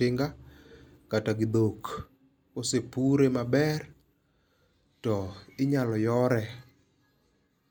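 Nothing stood out on listening to this speech recording.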